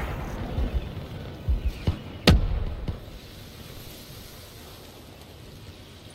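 No technical faults can be heard anywhere in this audio.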